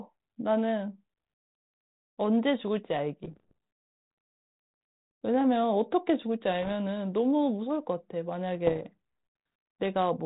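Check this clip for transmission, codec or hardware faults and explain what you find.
You've got bit errors on an ADPCM link in three bursts, riding over the narrowband G.726 sound, which fits 32 kbit/s with nothing above 4 kHz.

Bit errors on an ADPCM link hit at 3.24–3.53 s, 6.62–6.73 s and 8.67–8.81 s, at an error rate of roughly 0.5 to 0.7 percent. Each flipped bit throws off the decoder's step size and predictor, so you hear pops and rough, level-jumping bursts.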